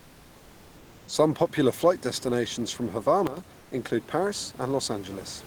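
A sudden gain jump at 3.27 to 3.37 s, just after "popular flight destinations from", drops the speech and the room noise beneath it together by about 12 dB in a single step, with no fade in or out. Both fall at the same instant, so the change comes from the digital gain and not from the talker or the room. The likely cause is a level setting or bit shift applied without a ramp. Comfort noise in place of the background follows at 3.59 to 3.71 s. For 120 ms the room noise, which elsewhere sits about 24 dB below the speech with its natural texture, becomes a steady, featureless hiss about 29 dB below the loud parts and about 2 dB quieter than the real background. This likely comes from discontinuous transmission, consistent with Opus DTX, where the sender's voice detector stops sending during the pause and the receiver fills the gap with synthetic noise.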